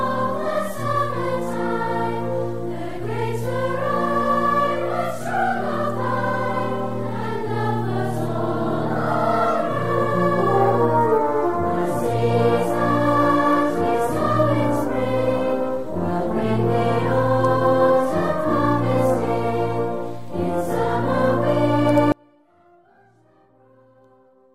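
An audio dropout to a faint residue begins abruptly at 22.12 s and runs to the end of the clip. The wanted sound collapses to a faint leak, roughly 35 dB below its normal level, rather than pausing or fading, most likely because the signal was lost while the path downstream stayed live.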